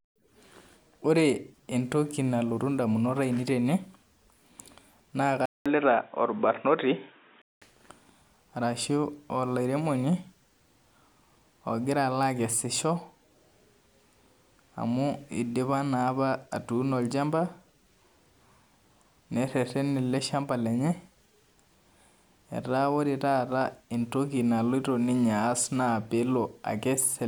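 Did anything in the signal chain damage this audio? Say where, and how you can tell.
Yes. At 5.46 s the speech drops out for about 200 ms, then comes back dull and boxy, with nothing above 3.8 kHz and a new noise floor about 40 dB down. The level barely moves. At 7.62 s the full band returns. That pattern points to the driver or device stage: the system likely switched its input to a poorer microphone or a headset call profile for about two seconds, then switched back.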